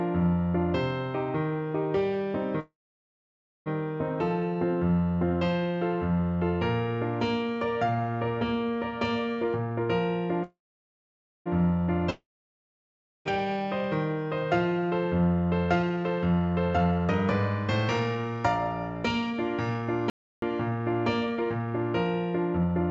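At 2.60 s the sound stalls. What was playing smears into a brief fading buzz, then about 0.93 s of near-silence, and at 3.69 s the audio resumes exactly where it stopped, with nothing skipped. This is a call audio freeze, likely from packets held up in transit so the jitter buffer ran dry. The receiver stretched the last sound to fill about 1.06 s and inserted that much extra delay into the stream.

From 9.43 to 9.89 s the audio suddenly rushes, running at about 168% of normal speed without any change in pitch. This is a jitter buffer speed-up. The buffer held more than its target, and the receiver trimmed a run of pitch-period-sized slices, roughly a third of a second in all, to bring the latency back down.

A second call audio freeze follows from 10.43 to 11.49 s. It has the same fading buzz into about 0.89 s of quiet, and again nothing is lost, only about 1.02 s of delay added.

At 12.10 s the sound fades the same way, but this time, when it returns at 13.28 s, it has jumped ahead. 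This is a long network dropout. Likely no packets reached the receiver for about 1.16 s, and that stretch was never played. The concealment buzz dies within a fraction of a second, leaving roughly 1.01 s of silence.

Straight after, from 13.32 to 13.58 s, the audio drags slightly, at about 87% speed with the pitch held steady. This is a jitter buffer slow-down. The receiver repeated single pitch periods, adding about 41 ms to rebuild a cushion.

From 15.67 s to 22.8 s a milder, sustained speed-up runs at about 116%, making the audio sound hurried over that whole stretch. The receiver was working off roughly a second of accumulated delay by repeatedly cutting short pieces.

Within that stretch, from 20.10 to 20.42 s, the sound cuts off abruptly into dead digital silence with no background at all, and it returns mid-flow. This audio dropout to silence lasts about 0.32 s. It was likely caused by the input being lost while silence was written, so that part is gone.

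Throughout the clip nothing is heard above 8 kHz, which fits a G.722 call codec at 64 kbps.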